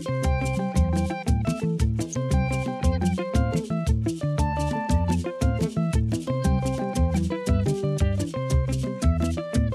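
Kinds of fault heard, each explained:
DAB burbling: Weak digital radio reception lets bit errors slip past the error correction and into the MP2 audio data. Corrupted samples put short blips of noise in single sub-bands, and corrupted scale factors make sub-bands jump in level for up to a frame. The result is short blips of noise laid over the audio. Here it happens twice. A very brief burst flashes at about 2.13 s. A longer patch runs from 4.51 to 4.61 s. Both fit a low error rate, well under one percent.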